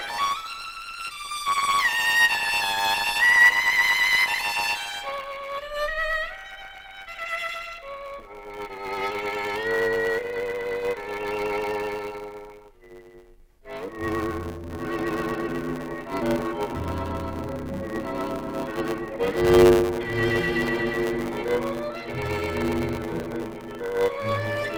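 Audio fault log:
throughout, block size mismatch (truncated): a steady 100 Hz buzz sits under the whole clip, and everything runs about 1.16 times too fast while keeping its normal timbre. Each block handed on is longer than the next stage takes, which fits 512-sample blocks, so the tail of every block is dropped. The cut at each block edge makes the buzz. A plain speed or sample-rate error would raise the pitch, and a padded mismatch would slow the audio instead.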